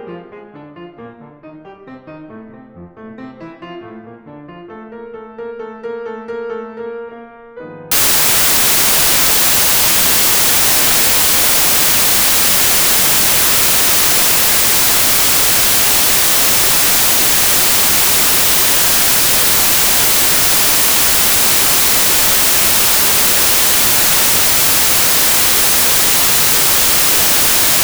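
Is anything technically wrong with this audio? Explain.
Yes. From 7.92 s to the end, the music turns into samples built from the wrong bytes: each sample's bytes are misassembled, so the rapidly changing low bits dominate. It sounds like loud, harsh broadband noise, and shows as a dense waveform with a broadband spectrogram.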